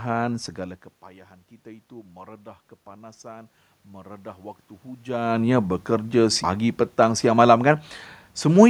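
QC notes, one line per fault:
1.63–6.43 s, automatic gain rising: The input falls by about 19 dB. The automatic gain control responds by raising its gain about 7 dB, slowly, over nearly five seconds. Voice and room noise swell together, so this is gain, not the talker moving.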